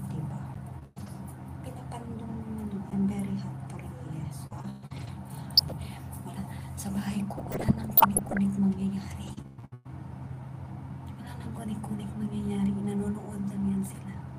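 At about 5.51 s you get a short patch of DAB burbling, running to 5.84 s, then a longer, denser bout from 7.37 to 8.38 s. It's short blips of noise in single sub-bands riding over the audio. Weak reception let bit errors slip past the error correction, roughly 0.4 percent in the first spot and about 0.7 percent in the second. Corrupted samples put short noise blips in single sub-bands, and corrupted scale factors make sub-bands jump in level for up to a frame.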